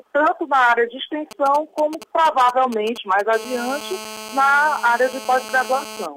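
From 1.31 to 3.21 s there is a galloping dit-dit-dit of brief raspy buzzes, sitting well down, around 15 dB below the signal. These are GSM signalling bursts: a nearby 2G phone is sending short clusters of radio bursts while it signals the network, and the audio circuitry rectifies them. The buzz inside each cluster repeats at 217 Hz, the burst rate of the phone's transmitter.

At 3.33 s the pattern turns into a continuous hard, raspy drone that runs to 6.06 s, about 15 dB below the signal. This is GSM phone buzz. The phone has moved into a call and now transmits in bursts, 217 times a second, so the rectified pulses produce a steady 217 Hz tone. Its sharp edges give it a dense stack of harmonics, and it has nothing to do with the wanted audio.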